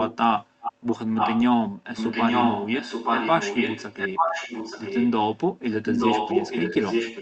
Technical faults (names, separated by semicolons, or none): echo leak